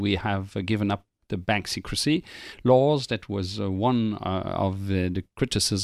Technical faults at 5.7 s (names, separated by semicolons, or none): none